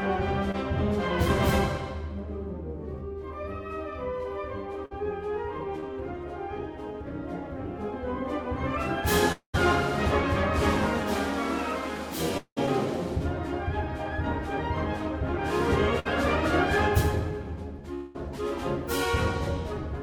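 At 0.51 to 0.55 s and again at 5.80 to 5.84 s, short concealed packet loss leaves a brief smear: about 20 ms of audio never arrived, and the receiver covered the gap with 20 ms extrapolated from the preceding sound before blending back. Unlike the longer faults, nothing fades; it is only a momentary smear or wobble.

A burst of packet loss falls at 4.85 to 5.05 s, where 60 ms went missing. About 52 ms of continued sound, turned down as it runs, fills the gap, and roughly 15 ms of extra time is added before normal audio resumes. The same fault returns at 15.99 to 16.07 s, again with 60 ms lost and about 57 ms of fading fill. What separates these from the short losses is the audible held buzz or decaying hiss, and the small jump forward when the sound picks up again.

The longer gaps at 9.32 to 9.55 s, 12.37 to 12.58 s and 17.94 to 18.16 s are likely long network dropouts, each losing about 200 to 220 ms. 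The concealment stretches the last sound for around 190 to 213 ms and lets it die away. At 9.32 s about 100 ms of silence follows, and at 12.37 s about 70 ms, before the audio returns further along. The 17.94 s gap fades without reaching silence. Their length, and for the first two the stretch of emptiness, set them apart from the bursts.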